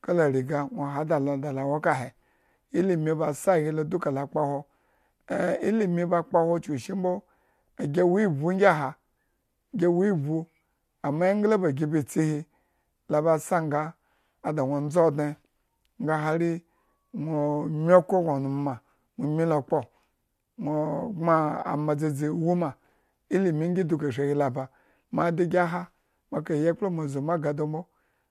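No technical fault can be heard anywhere in the recording, and the signal holds steady throughout.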